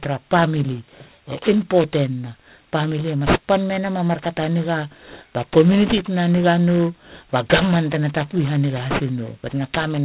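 It's a speech recording with aliasing running the whole way through. The sibilants come out gritty and metallic, and the top of the spectrum is packed right up to a hard edge at 4 kHz. That points to a sample-rate drop, likely from 48 kHz to 8 kHz, done without an anti-aliasing filter first. Everything above 4 kHz has folded back down into the band as false tones sitting only roughly 10 dB under the speech.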